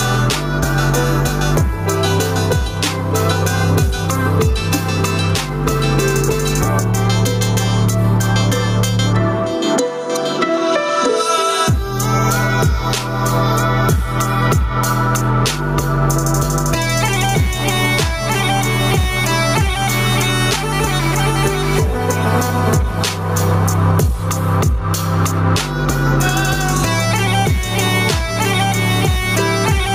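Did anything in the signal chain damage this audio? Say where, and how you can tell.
Yes: gain pumping runs through the whole clip. The gain ducks by around 10 dB under every loud sound, leaving loud and soft parts squashed together. The likely cause is input gain set far too high, with a fast limiter clamping every peak.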